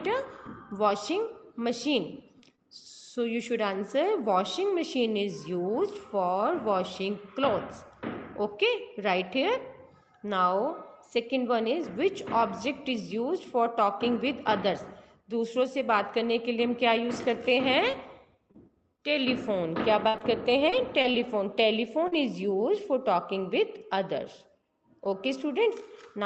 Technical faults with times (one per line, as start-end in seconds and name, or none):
2.09-2.24 lost packet rebuilt from error correction
2.40-2.60 short concealed packet loss
2.86-2.88 lost packet rebuilt from error correction
17.83-19.00 scattered short gaps
20.08-22.14 repeated packet loss (robotic sound)